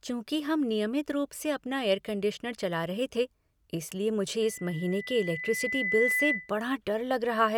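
At 4.42 s, just after "रहे थे इसलिए मुझे", a loudspeaker feedback squeal begins and lasts until 6.52 s. The microphone is picking up its own loudspeaker, and the loop gain at 2 kHz exceeds one, so that tone feeds itself and swells over roughly a second and a half. It ends up a few dB louder than the speech. A spectrogram shows a single bright horizontal line at 2 kHz, and the waveform envelope bulges steadily outward.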